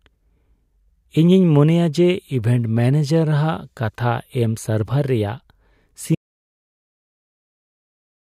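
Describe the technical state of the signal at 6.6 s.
At 6.6 s the speech has stopped dead into total silence with no room tone, an audio dropout to silence running from 6.15 s to the end, likely from input lost while zeros were written.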